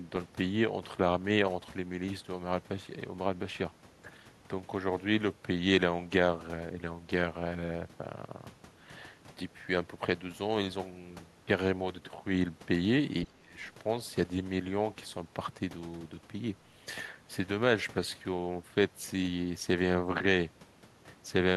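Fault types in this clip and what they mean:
Speech suppressed in double talk: between 13.24 and 13.57 s the speech level drops sharply, by roughly 25 dB at its deepest, for about a third of a second, so the voice dips before recovering. This is likely an echo canceller's suppressor reacting to both ends talking at once: unable to tell the local talker from loudspeaker echo, it attenuated everything it picked up during the overlap.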